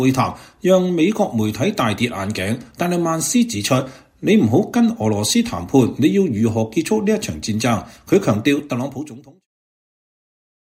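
The signal holds steady with no technical faults, apart from a deliberate smooth fade-out that begins at around 8 s and reaches silence at 9.48 s without any click or hard edge.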